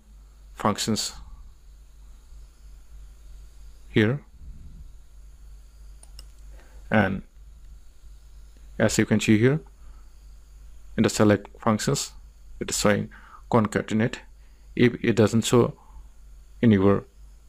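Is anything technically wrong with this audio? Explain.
No, nothing stood out as a technical problem on listening to this audio.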